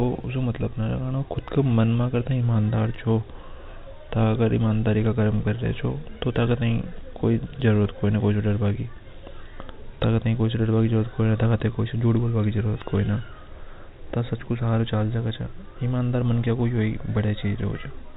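No technical faults are audible.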